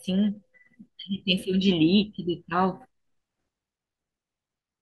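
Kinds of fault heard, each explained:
No technical faults can be heard in the speech recording; the signal stays continuous and stable throughout.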